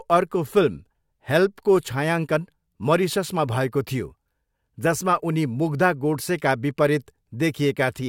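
No technical faults can be heard anywhere in the recording. With nothing going wrong at any point, there are no events to place in time order.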